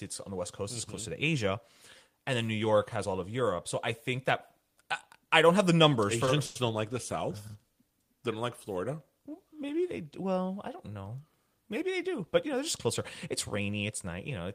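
At 6.25 to 6.30 s the speech holds on one sound for a moment: a short stall from a late packet. The packet carrying the next stretch of audio had not arrived when it was due, so the jitter buffer ran dry and the receiver extended the last sound by 20 ms until the packet turned up. Playback then continued from the same point, so nothing is lost. The only trace is a slightly drawn-out sound with a faint buzzy quality, and everything after it now plays 20 ms later.

Shortly after, from 6.45 to 6.58 s, comes a longer call audio freeze. The speech stops moving forward, and the last sound continues as a buzzy fill that fades but never drops to true silence. It lasts 100 ms. The likely cause is packets being held up in transit, which emptied the jitter buffer again. When they arrived, the audio resumed exactly where it had stopped. No speech is missing, but a 100 ms gap has been inserted, and the playout delay has grown by the same amount.

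Between 11.79 and 12.59 s a jitter buffer speed-up takes place. With more audio queued than the buffer's target, the receiver trimmed tiny pitch-period-length slices out of the signal many times in a row. Together they remove roughly 50 ms. The speech runs at about 106% of normal speed over that stretch while keeping the same pitch, so it sounds slightly hurried rather than higher. This brings the delay back down toward the buffer's target.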